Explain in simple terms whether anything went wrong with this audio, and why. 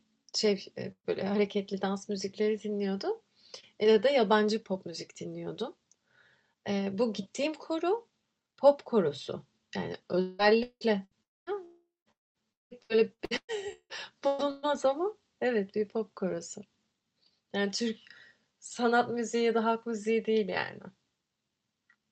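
The speech breaks up badly from about 10.2 s to 14.7 s. Three kinds of trouble are stacked together there.

The first is a long network dropout, repeated five times: at 10.21 s, 10.63 s, 11.23 s, 11.65 s and 12.12 s. These gaps last from about a fifth of a second up to nearly half a second, with the longest at 11.65 s. In each one the sound turns into a smeared hum where the receiver keeps stretching the last bit it heard, and then it goes quiet. The first gap fades without reaching silence, but the later ones leave up to about a quarter second of dead air. When the speech returns, that chunk has simply been skipped. The likely cause is the network briefly delivering nothing at all.

There's also a shorter burst of packet loss at 11.05 s, lasting about 60 ms. It's a quick blip where the sound holds for a moment and dips before carrying on, with a sliver of speech missing.

From 12.53 s to 14.66 s there's repeated packet loss (robotic sound). 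Eight small holes, the longest about 180 ms, are each patched by repeating the last bit of sound. Together they cover about 40 percent of that stretch. That's what gives the speech its choppy quality there.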